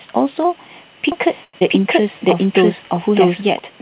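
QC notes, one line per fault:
1.12–3.59 s, doubled audio track: A second copy of the signal was likely picked up by a slower parallel path and mixed back in. From 1.12 s a full-band duplicate runs roughly 0.7 s behind the original at about the same level, with no decay or room colour of its own. It cuts in and out abruptly, so the speech overlaps itself like two people reading the same line out of step.
1.44–1.55 s, short stall from a late packet: A packet missed its playout deadline and the jitter buffer ran dry, so the receiver kept extending the last sound for 94 ms until the packet arrived. Nothing is lost, because playback resumes exactly where it stopped. What you hear is one sound held unnaturally long with a faint buzzy, slightly dipping quality, and the stream ends up 94 ms later than before.
1.59–1.63 s, skip ahead: Immediately after the stall, a block of audio was dropped while later audio was already queued, likely as the jitter buffer shed the extra delay. 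About 70 ms of speech is missing, bridged by only 15 ms of fill, so playback jumps forward and the two sides are spliced almost directly. The result is a small forward lurch.
1.79–2.20 s, jitter buffer slow-down: With its reserve likely running low, the jitter buffer rebuilt it by repeating single pitch periods and bits of pauses many times in a row. This adds 44 ms across 0.4 s, so this stretch plays at about 91% speed with unchanged pitch. The speech sounds drawn out and slightly sluggish.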